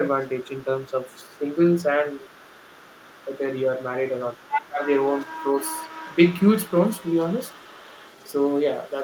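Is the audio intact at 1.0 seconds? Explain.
No. At 1.0 s the talker's device is likely playing the far end on a loudspeaker while its echo canceller fails to remove all of it, so the other side's voice leaking through is present from 0.07 s to the end of the clip. It sits faint behind the talker, roughly 25 dB down, a second voice that stays audible in the background rather than replacing the main speech.

The same moment falls inside the speech suppressed in double talk span, 0.9 to 1.44 s. Here both ends are talking at once, and the canceller, likely unable to separate its own talker from the returning echo, turns everything down together. The talker's voice sags by up to around 10 dB in brief pieces, adding up to about a fifth of a second within that span.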